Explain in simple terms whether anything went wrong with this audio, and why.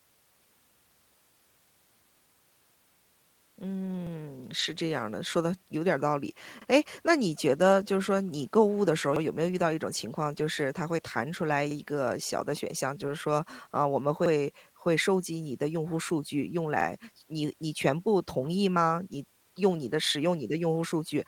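Overlapping chunks occur at 4.07, 6.62, 9.16, 11.71, 14.26 and 16.81 seconds. The speech was handled in pieces 2.5 seconds long, and each piece began about 48 ms before the previous one finished, so that sliver plays twice and causes a brief stutter at every join.

A lost packet was rebuilt from error correction at 4.59 to 4.65, 11.37 to 11.51 and 13.07 to 13.09 seconds. Small pieces of the audio went missing in transit, but the following pieces carried rougher backup copies. Playing those copies avoided silent gaps and left short patches that sound grainier and noisier.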